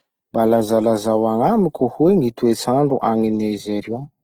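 From start to finish the speech sounds grainy and rough, the telltale texture of Opus compression, likely in its CELT music mode at around 16 kbps. Starved bands get filled with noise rather than left empty, so there's little swirl, and content still reaches 20.2 kHz.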